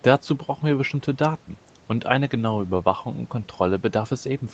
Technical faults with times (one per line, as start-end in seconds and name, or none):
none